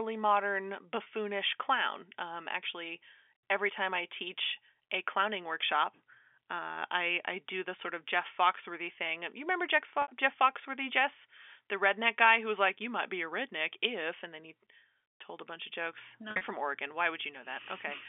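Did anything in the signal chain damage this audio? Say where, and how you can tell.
Yes, there's packet loss with pitch repetition on the network side, heard through a G.711 telephone band that cuts off above 3.5 kHz. At 1.03 s about 30 ms drops out, and at 10.02 to 10.08 s about 60 ms. Just after "a bunch of jokes", 16.29 to 16.41 s loses about 100 ms in bursts, the longest around 50 ms. Each gap gets papered over by looping the last pitch cycle and fading it out over about 50 ms, hence a brief held, buzzy sound on the short gaps, while the 60 ms one fades into silence before the speech cross-fades back in.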